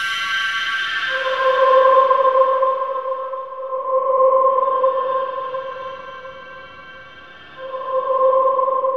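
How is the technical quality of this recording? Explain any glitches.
No technical faults are audible.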